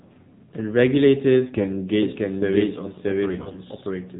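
Speech squeezed through the AMR narrowband mobile codec at 7.4 kbps, so nothing above 4 kHz survives and the voice has that buzzy, synthetic phone-call sound throughout. AMR bit errors turn it hoarse and gargly from 1.36 to 1.69 s and again, more heavily, from 3.28 to 3.59 s. Pitch and level roughly hold, but flipped bits in the less protected part of each frame scramble the pulses driving the voice model. From 2.02 s to the end there's a doubled audio track: a dry copy at about the same level trails around 0.7 s behind, most likely from a second, slower capture path or a misaligned edit.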